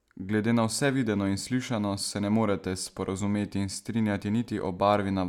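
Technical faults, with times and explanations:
No technical faults can be heard in this speech.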